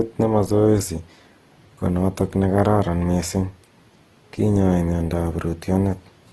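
From start to finish the speech has a grainy, rough texture: voiced sounds carry a noisy fizz instead of clean harmonics. The top end stops around 12 kHz. This points to Opus compression, likely in its CELT music mode at a low rate near 16 kbps, where the encoder keeps each band's energy but fills starved bands with folded or noise-like content, so detail turns coarse rather than dropping out.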